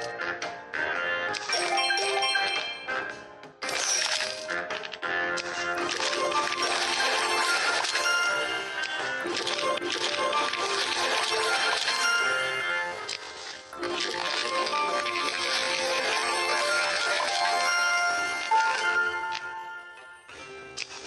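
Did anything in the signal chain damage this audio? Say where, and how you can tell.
Yes. From 12.48 s to the end at 21.06 s, the audio is a time-stretched section: the pace drops abruptly to about 0.58 times normal speed while the pitch stays put, and the slowed material drags. The likely cause is software time-stretching in the processing or playback stage, repeating short pieces of the signal to lengthen it. A wrong sample rate or slow playback would also lower the pitch, but here the pitch does not change.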